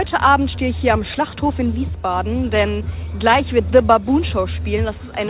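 Nothing here goes wrong at any point; the sound simply carries the narrow telephone character of a G.711 mu-law call path at 64 kbps, with nothing above 4 kHz.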